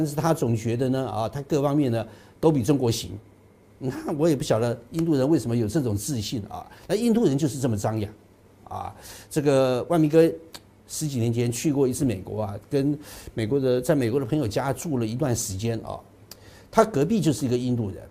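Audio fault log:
No faults detected anywhere in the clip.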